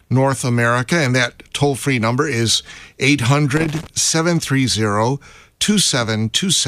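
A speech recording with a short burst of loose connector crackle from 3.57 to 3.87 s, lasting about 0.3 s. The sound is an irregular scratching crackle rather than a single click. It points to a worn or dirty contact in the signal path that intermittently opened and closed as the plug or cable shifted, chopping the audio on and off, with any DC present on the line adding pops.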